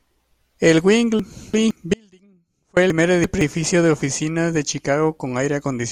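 A block of audio was delivered late and played after the two blocks meant to follow it. Between 1.20 and 1.71 s this chunks-out-of-order fault reshuffles three segments of about 171 ms each, so the speech jumbles briefly.

From 1.94 to 2.77 s the wanted signal was lost while the path downstream stayed live, likely a break upstream of the output. This audio dropout to a faint residue cuts the speech off abruptly, and for about 0.83 s only a faint leak remains, about 30 dB below normal level.

The same reordering returns between 2.90 and 3.41 s. One 171 ms chunk plays two chunks late, scrambling the speech again.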